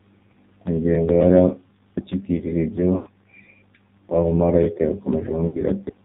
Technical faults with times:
0.00-6.04 AMR narrowband mobile codec
2.96-3.09 lost AMR speech frames
5.48-5.62 lost AMR speech frames

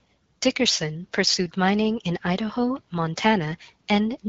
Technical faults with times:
none

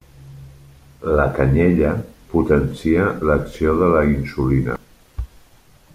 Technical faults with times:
4.73-4.76 damaged data in a compressed stream

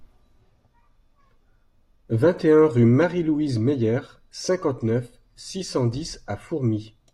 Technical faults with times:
none

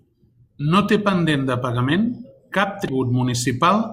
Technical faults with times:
2.86-2.89 damaged data in a compressed stream

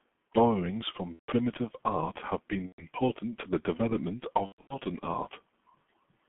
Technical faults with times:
0.00-6.29 G.723.1 codec
1.13-1.31 VoIP packet loss concealed by the speech codec
2.66-2.83 VoIP packet loss concealed by the speech codec
4.46-4.80 VoIP packet loss concealed by the speech codec

